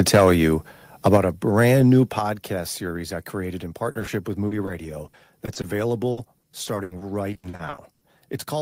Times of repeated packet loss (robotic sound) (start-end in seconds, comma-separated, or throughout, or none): 5.07-5.65, 6.11-8.03